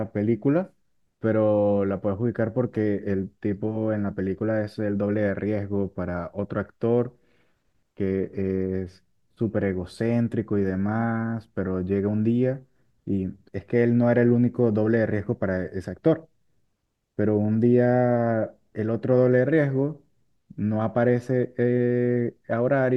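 A speech recording with no technical faults to report. Nothing in it points to dropouts, clipping, glitches or other playback and transmission problems.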